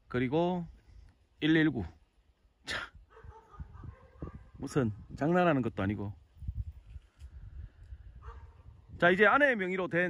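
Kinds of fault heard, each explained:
Short stall from a late packet: around 5.41 to 5.46 s one packet arrived after its playout time, so the jitter buffer emptied and the receiver held the last sound for about 22 ms before resuming exactly where it left off. Nothing is skipped; the sound simply lingers with a slight buzz or dip, and everything after it runs about 22 ms later. That held-then-continued shape, with no gap or jump, separates it from a dropout or a concealed lost packet.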